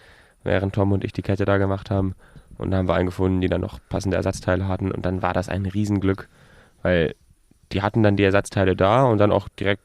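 A speech clip with one brief glitch: from 7.72 to 7.75 s, just before "die hatten dann die", the sound turns into a quick garbled flutter. This is frames out of order. Two neighbouring blocks of audio, each around 10 ms, which fits single codec frames, were decoded in swapped order, so that short stretch plays with its halves reversed. No time is lost overall.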